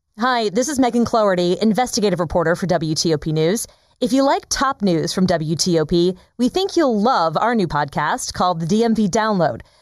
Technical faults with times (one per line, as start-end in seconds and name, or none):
0.00-9.82 channel delay (comb filtering)